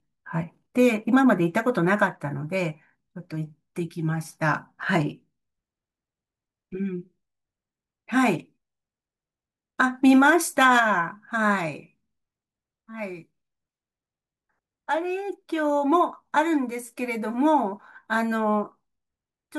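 A stretch of ordinary speech, and nothing technical goes wrong with it anywhere along the way.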